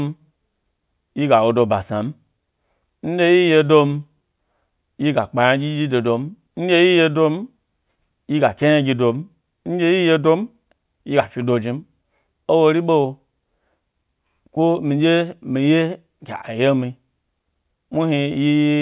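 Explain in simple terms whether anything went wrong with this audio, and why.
Nothing went wrong here; the speech comes across steadily the whole way, with no glitches, dropouts or other technical problems to point to.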